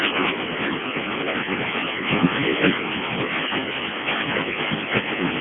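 Throughout, the speech carries heavy Codec 2 vocoder damage. Only pitch, voicing, energy and a coarse spectral envelope survive, and the voice is rebuilt from sine waves, so it sounds robotic and buzzy. The band runs 150 Hz to 3.4 kHz with nothing above 3.5 kHz, and the coarseness points to the lowest 0.7 kbit/s mode.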